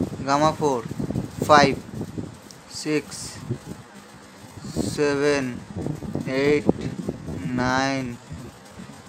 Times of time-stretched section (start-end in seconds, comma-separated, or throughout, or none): 3.39-9.09